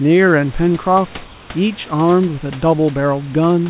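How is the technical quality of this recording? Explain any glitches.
One glitch stands out. From 1.24 to 1.5 s, a 260 ms pause, the room's natural background gives way to a flat, featureless hiss about 2 dB quieter. This is likely comfort noise in place of the background: the sender's voice detector stopped transmission, and the receiver synthesised stand-in noise. The speech band stops at 4 kHz, which fits a narrowband call codec such as G.711 at 64 kbps. Steady room noise sits about 25 dB below the speech.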